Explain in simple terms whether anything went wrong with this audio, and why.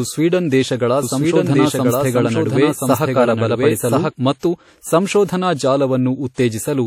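Two things went wrong. First, the whole clip has a smeary, washy quality with a hiss that swells and fades along with the speech, and the very top of the sound is cut off. That's likely WMA compression squeezing the file hard and throwing detail away.

Second, from about 1.03 s to 4.11 s, just after "ಸ್ವೀಡನ್ ದೇಶಗಳ", there's a doubled audio track: a second copy of the speech runs about a second behind, roughly as loud. It likely came from the audio being captured twice by a slower path, or from an edit that left two copies out of step. It starts and stops abruptly, with no echo tail.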